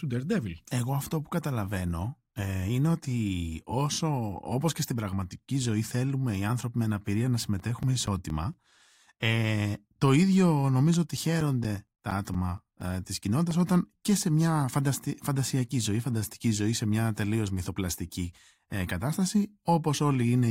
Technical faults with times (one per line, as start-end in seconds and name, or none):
7.13-8.77 CD scratch ticks
10.94-13.51 CD scratch ticks